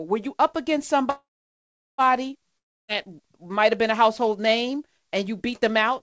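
A speech recording carried over a call link, with nothing above 8 kHz as a wideband G.722 codec would give, has two interruptions. The first is a call audio freeze from 1.10 to 2.01 s, right after "were you up against". It likely came from packets being held up in transit until the jitter buffer ran dry. The receiver stretches the last sound into a fading buzz for a moment, then about 0.75 s of silence follows. When the delayed packets arrive, playback resumes where it stopped, so about 0.88 s has been inserted and nothing is lost, leaving everything after it that much later. The second fault, from 2.58 to 2.91 s, is a long network dropout, likely a stretch of packets that never arrived at all. Again the last sound trails off briefly before about 0.29 s of silence. This time the speech picks up further along, and roughly 0.3 s of it is gone for good, so the talk jumps past the missing piece.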